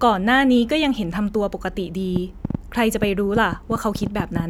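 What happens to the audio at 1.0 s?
At 1.0 s the speech plays through intact, with no dropout, click, distortion or other fault.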